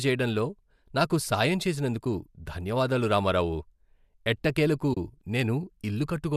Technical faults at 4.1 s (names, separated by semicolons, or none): none